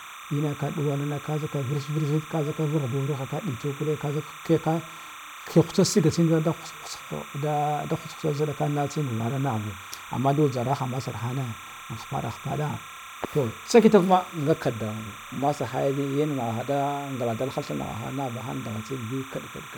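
A steady chirping warble sits behind the speech for the whole clip, about 15 dB below it. This is timecode bleed: linear timecode leaking in from an adjacent track or cable, flipping between tones near 1 kHz and 2 kHz, in a pattern that fits 30-frame code.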